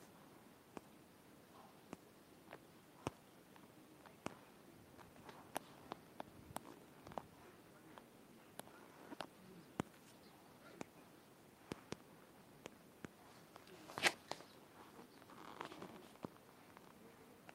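No technical faults can be heard anywhere in the speech recording.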